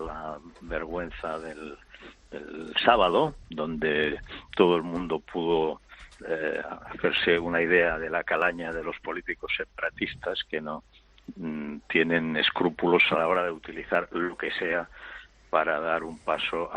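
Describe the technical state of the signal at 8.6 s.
At 8.6 s the audio sits inside a run of clock slip clicks lasting from 0.10 to 16.74 s, likely from two unsynchronised clocks differing by around 400 ppm, so a single sample slips roughly every 50 ms, heard as a faint, steady ticking rattle.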